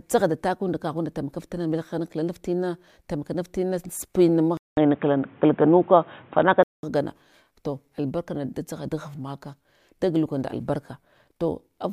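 At 4.57 s there's a 200 ms dropout, then the speech turns dull and boxy with nothing above 3.8 kHz, a level shift of around 5 dB and a faint new noise floor, until 6.83 s. Likely the input switched to a poorer device.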